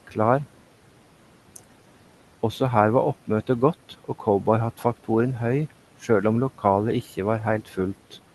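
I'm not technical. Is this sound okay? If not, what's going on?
No. Near the end, from 7.65 to 7.75 s, the speech was cut by the noise suppressor: the filter meant to remove background hiss mistook a brief bit of speech for noise and turned it down, so for about a tenth of a second the sound goes faint and swallowed.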